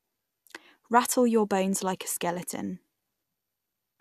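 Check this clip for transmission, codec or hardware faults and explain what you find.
No faults were found on checking this clip.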